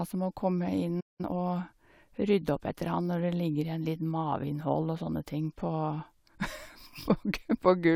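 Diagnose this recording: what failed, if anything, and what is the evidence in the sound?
Playback stall at 1.0 s: the speech falls silent until 1.21 s, a clean gap rather than concealment noise, likely a starved or blocked playback buffer.

Time-compressed catch-up follows, 1.21 to 1.39 s: the player clears its backlog at double speed, hurried yet at normal pitch, unlike a sample-rate error.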